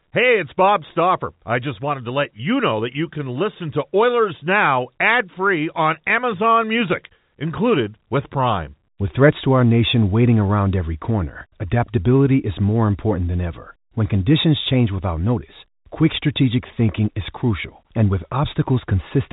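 Nothing stood out on listening to this speech, which has the narrow telephone-band quality of G.711 coding, with nothing above 3.8 kHz.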